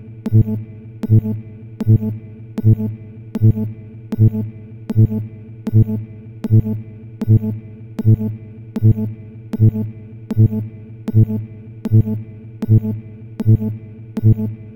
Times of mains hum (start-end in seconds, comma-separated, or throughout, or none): none